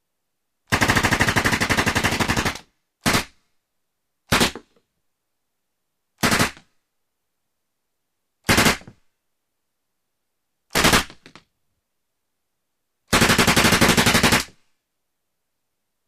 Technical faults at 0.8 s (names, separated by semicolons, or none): none